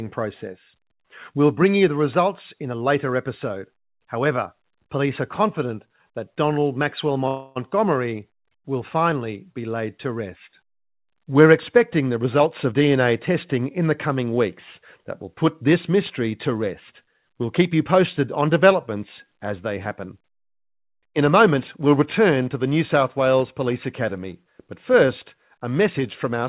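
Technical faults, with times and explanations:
7.28–7.58 s, call audio freeze: the sound stalls into a fading buzz for about 0.28 s, likely packets held up and the jitter buffer running dry, then resumes where it left off.
12.24–12.82 s, jitter buffer speed-up: after "expecting the", things rush at 124% speed, same pitch, as tiny pitch-period slices get trimmed, roughly 150 ms gone before "testing in the coming".
20.60–22.38 s, jitter buffer speed-up: a milder 108% hurry after "developments as they happen", again trimming roughly 150 ms in pitch-sized bites to drain excess buffer, ending at "to the".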